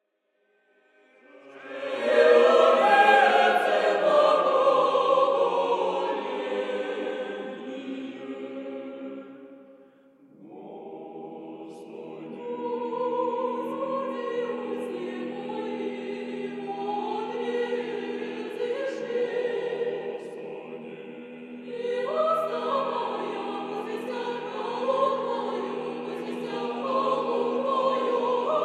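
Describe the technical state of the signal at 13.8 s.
At 13.8 s the signal is intact, with no audible fault at that point.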